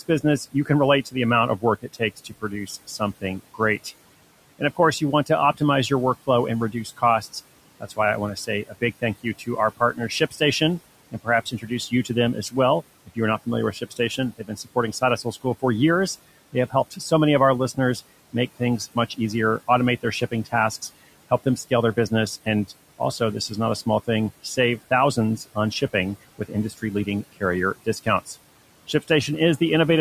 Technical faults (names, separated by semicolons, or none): noise suppressor artifacts; speech cut by the noise suppressor